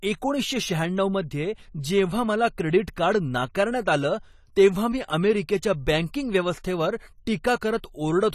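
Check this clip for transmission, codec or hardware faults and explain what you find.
One codec fault runs through the whole speech clip: AAC compression. Nothing sounds above 14 kHz, and the sibilants carry a fizzy, warbling smear, which fits AAC-LC at roughly 32 kbps as the likely cause. The hearing model starves bands of bits, which sets it apart from a plain low-pass filter.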